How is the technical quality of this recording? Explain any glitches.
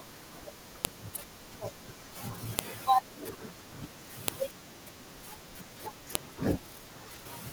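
There's a recurring glitch: sharp, loud clicks at 0.85, 2.59, 4.28 and 6.15 s. That's a file header played as audio. The speech was joined from separate WAV pieces with their headers left in, so those bytes play as samples and snap at each join, regardless of what the speech is doing.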